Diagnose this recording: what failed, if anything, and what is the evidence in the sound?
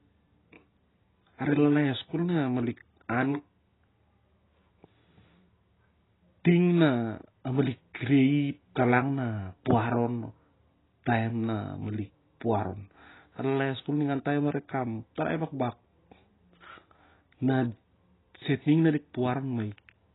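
The speech is degraded throughout at the codec stage, likely by AAC compression. Nothing survives above 3.9 kHz, and sibilants come out smeared and fizzy with a warbling texture, which fits heavily starved AAC-LC at around 16 kbps. A plain low-pass filter would only dull the top, without that swirling.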